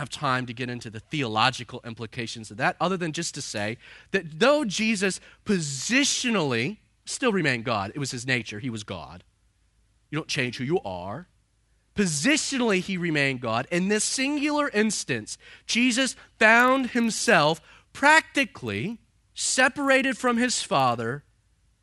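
A speech clip in which, from 16.52 s to the end at 21.82 s, a 25 Hz buzz of regular ticks rides on the signal. This is a resampler restarted on every block: 40 ms blocks in a 24 kHz to 48 kHz conversion each get an edge error. Unlike mains hum, it vanishes in pauses.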